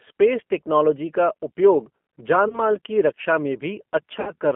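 Throughout, the speech carries plainly audible G.729 codec damage: an 8 kbit/s coder rebuilding each frame from a filter, a pitch predictor and a few pulses, giving a rough, slightly synthetic tone. A spectrogram shows energy confined to about 200 Hz to 3.4 kHz, with nothing above.

From 2.48 to 2.60 s, and again from 4.21 to 4.31 s, VoIP packet loss concealed by the speech codec appears. The decoder stretches the last pitch into a fading buzz, which fits one lost 20 ms packet and then three lost packets (about 60 ms). On a waveform this looks like repeated periodic cycles with shrinking amplitude. The spectrogram shows smeared, static harmonics.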